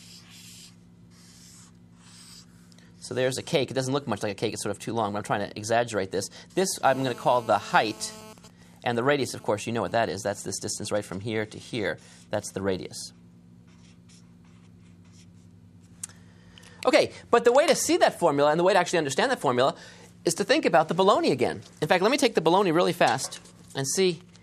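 From 6.85 to 8.33 s a hard, raspy buzz at 217 Hz, rich in harmonics and unrelated to the audio, sits about 21 dB below the signal. This is GSM phone buzz: a 2G phone in a call transmits bursts 217 times a second, and the audio circuit rectifies them.

From 8.38 to 11.14 s the buzz gives way to even ticks, with a longer buzz twice a second, around 30 dB below the signal. These are GSM signalling bursts: with its user silent, the phone sends only sparse 217 Hz burst groups, which the circuit picks up.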